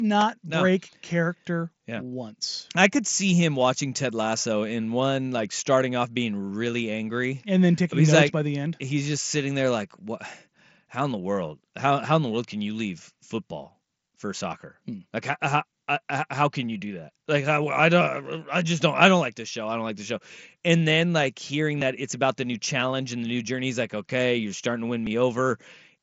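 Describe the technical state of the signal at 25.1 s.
A dropped buffer (overrun) sits at 25.07 s, just after "okay you're starting to". It is heard as a jump where the speech skips forward with no gap of silence, as though a sliver of about 10 ms had been cut out and the two edges butted together. The likely cause is the recording software failing to collect a block of samples before the hardware overwrote it, so that block was lost rather than delayed.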